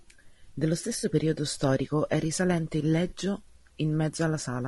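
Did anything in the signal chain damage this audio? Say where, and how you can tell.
Yes, at the codec and the network. The speech is rough and grainy throughout, with noise between the harmonics and a synthetic top band. The likely cause is low-delay AAC compression, AAC-ELD. Its short frames resolve pitch poorly. The grain fits a bitrate near 32 kbps.

AAC frame loss with concealment occurs twice. From 0.99 to 1.05 s, a 40 ms smeared, noisy patch fits two lost frames. From 3.09 to 3.13 s, a 20 ms smear fits one. Each time, the decoder filled the gap from the last good spectrum.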